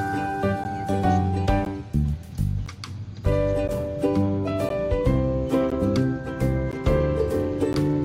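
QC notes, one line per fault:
0.64, 1.65, 2.66, 3.68, 4.69, 5.70, 6.72 and 7.73 s, gap between chunks: a hard-edged hole of about 13 ms recurs once per second. Silence is inserted at each join between 1 s chunks, so no sound is lost, but the flow breaks abruptly and regularly.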